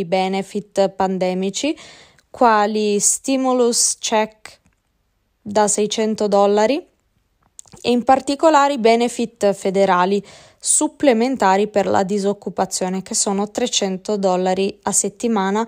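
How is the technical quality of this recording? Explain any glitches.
Nothing to explain: no technical faults turn up anywhere in the recording.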